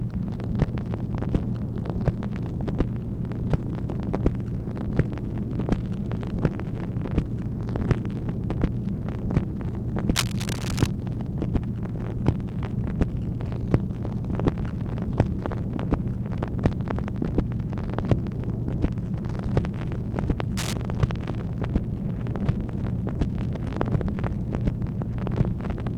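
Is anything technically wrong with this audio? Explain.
Yes. From 10.15 to 10.86 s and from 20.57 to 20.73 s, a loud scratching rustle sits just below the sound: cable scratch noise, likely a worn connector whose contact resistance flickers as it moves.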